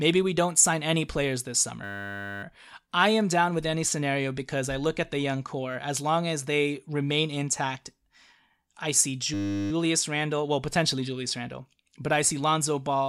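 The computer or its audio driver stalls twice while the sound hardware keeps replaying its ring buffer, a system hang loop. A 10 ms slice repeats at 100 Hz, which turns into a steady buzz rather than a stutter. The first hang runs from 1.84 to 2.43 s, after "sign any players this" and before "I am down with". The second runs from 9.34 to 9.71 s, after "I see". Speech resumes without apparent loss.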